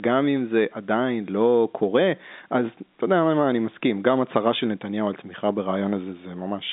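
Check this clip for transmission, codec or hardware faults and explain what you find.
I found no transmission, codec or hardware faults in this clip.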